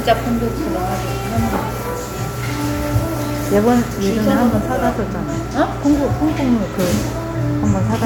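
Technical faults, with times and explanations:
No technical faults are audible; the signal holds continuity across the whole recording, with nothing in its transmission or processing standing out to the ear.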